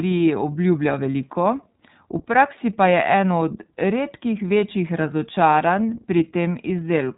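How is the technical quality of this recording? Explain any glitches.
The speech has been squeezed through the iLBC codec for the whole clip, and it's plainly audible. The top end stops at 4 kHz, so it sounds narrowband and phone-like. Each short frame's excitation is coded on its own, roughly every 30 ms, which fits the 13.33 kbps mode. That gives the voice a slightly rough, buzzy, synthetic edge throughout.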